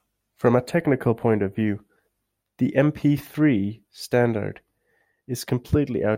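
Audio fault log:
0.67 to 1.67 s, channel delay (comb filtering): for this second of the speech one channel runs late by roughly a tenth of a millisecond, a few samples, and the mono sum cancels their shared content at evenly spaced frequencies, the first notch near 5 kHz, leaving the upper range hollow and phasey.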